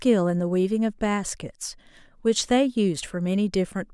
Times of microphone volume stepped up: none

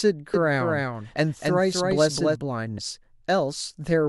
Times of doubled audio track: 0.34-2.36

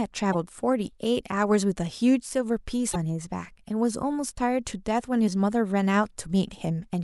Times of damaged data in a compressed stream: 0.30-0.35, 2.92-2.96, 5.24-5.28

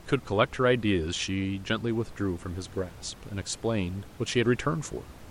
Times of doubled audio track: none

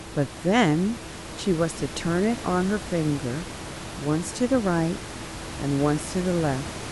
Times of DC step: none

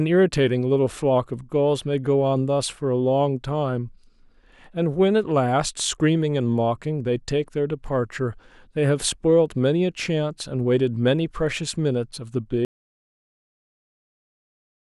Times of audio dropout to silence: 12.65-14.89

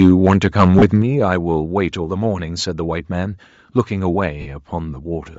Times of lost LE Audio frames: 0.79-0.82, 4.41-4.47

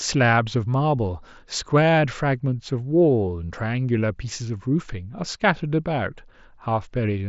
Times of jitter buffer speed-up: none

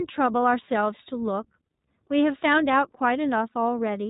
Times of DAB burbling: none

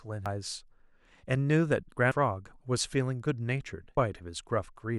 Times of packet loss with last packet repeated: none

